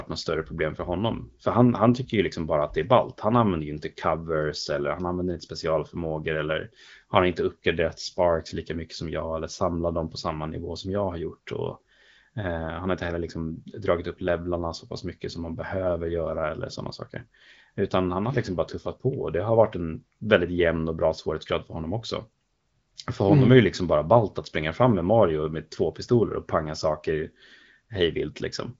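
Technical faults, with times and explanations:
Nothing here sounds faulty; the speech simply carries the usual character of AMR wideband (HD Voice) coding, with its top end stopping around 7.5 kHz and a light coded texture that fits one of the higher bitrates, around 15.85 kbit/s.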